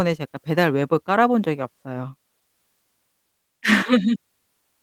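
Nothing stood out on listening to this speech.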